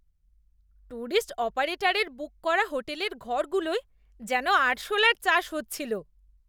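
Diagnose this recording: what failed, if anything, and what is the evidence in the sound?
Nothing in the speech signal points to a failure at any stage of the chain, from capture and conversion through to playback, so there is no fault to diagnose.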